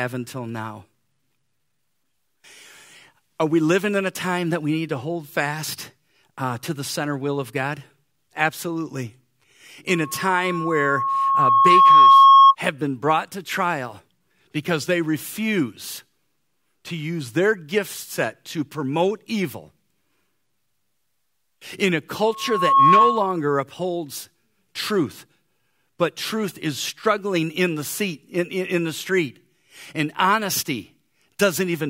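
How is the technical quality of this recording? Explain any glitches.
The speech is marred twice by loudspeaker feedback squeal. From 9.88 to 12.55 s, a steady 1.1 kHz tone swells over about two seconds to roughly 15 dB above the speech. From 22.22 to 23.42 s it returns faster, peaking within half a second at about 10 dB above. The microphone picks up its own loudspeaker. At 1.1 kHz the loop gain exceeds one, so that tone keeps feeding itself.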